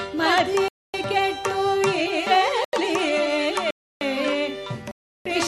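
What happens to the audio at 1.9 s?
Nothing goes wrong at 1.9 s; the audio runs on intact through that moment with no break, glitch or change in level.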